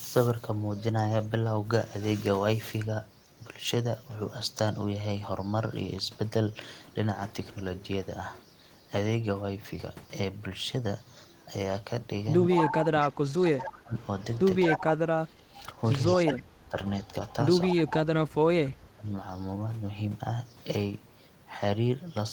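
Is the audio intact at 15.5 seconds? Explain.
No, 15.5 s sits inside a stretch of speech suppressed in double talk, from 14.66 to 16.77 s. The speech dips by up to about 25 dB, around a second and a half in all, likely an echo canceller mistaking the talker for echo.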